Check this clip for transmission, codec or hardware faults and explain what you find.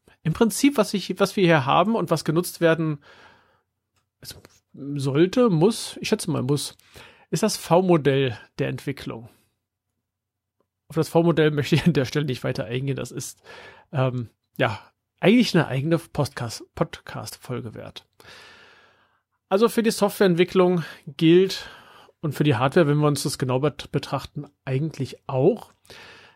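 One codec fault is present. Compressed frames skipped at 17.28 s: about one frame, roughly 30 ms of the speech, never plays because it was missing or rejected as damaged. The audio jumps ahead by that gap, leaving a brief glitch at the join.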